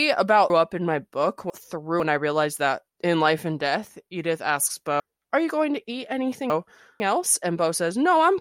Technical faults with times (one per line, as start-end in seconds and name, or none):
0.50-2.00 chunks out of order
5.00-7.00 chunks out of order